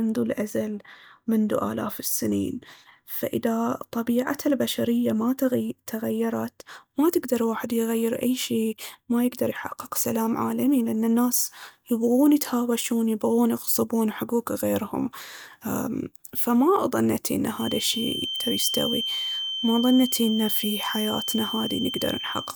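A loudspeaker-to-microphone loop likely sat right at the edge of feedback from 17.52 s, just after "فما ضنتي ان", to the end. This feedback whistle holds a thin, steady 3.1 kHz tone a little below the speech, swelling and fading slowly in level.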